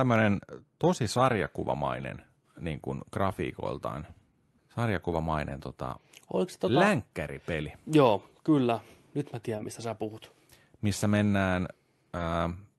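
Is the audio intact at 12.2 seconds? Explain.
No. Short concealed packet loss occurs from 12.17 to 12.21 s. About 20 ms of the speech never arrived at the decoder in time, so the receiver filled the gap itself, extending the preceding sound along its pitch where it was voiced or as shaped noise where it was not, then cross-fading back into the real signal. At this moment that patch is heard as a brief smear or wobble, and a short consonant there may be lost.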